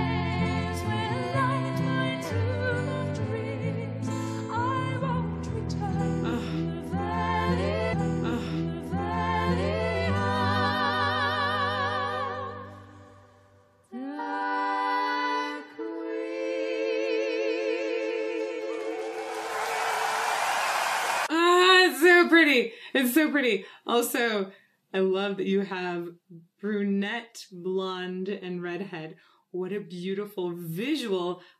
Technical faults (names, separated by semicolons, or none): stream segment repeated